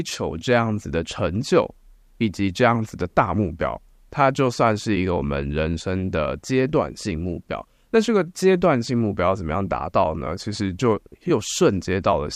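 Nothing goes wrong anywhere in this bit of speech, so there's no fault to point to at any moment.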